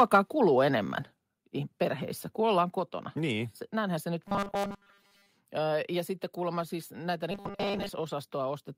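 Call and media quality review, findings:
Robotic sound from repeated short buffers, 4.28–5.29 s and 7.31–7.89 s: speech becomes a rigid 200 Hz metallic buzz, likely from starved playback looping a 5 ms buffer and skipping most incoming audio.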